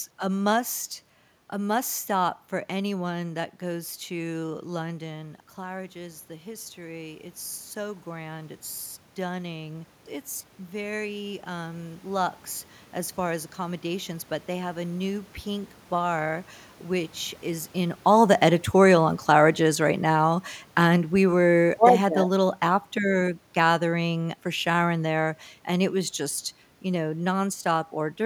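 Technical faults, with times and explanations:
17.93 to 25.97 s, automatic gain falling: the level sinks steadily by about 8 dB over these eight seconds. The gain control judged the input too loud or its background noise too strong and pulled its gain down gradually rather than at once, so the room noise drops along with the speech instead of staying put, which marks this as a processing change and not the talker shifting position, as happens near 17.5 s and 5 s.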